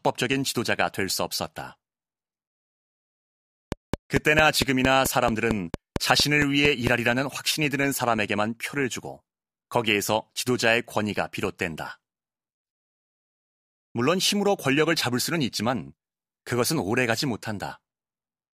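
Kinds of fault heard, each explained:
Train of clicks: a steady ticking of about fifteen near-identical pops, about 4.5 per second, from 3.72 to 6.88 s, standing roughly 15 dB above the speech and heard in the pauses too. Likely cause: interference from nearby equipment or a faulty connection or power supply injecting repeated pulses.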